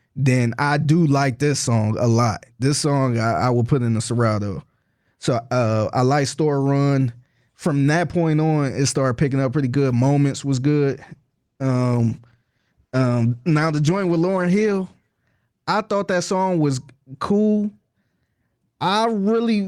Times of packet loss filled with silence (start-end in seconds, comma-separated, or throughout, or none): none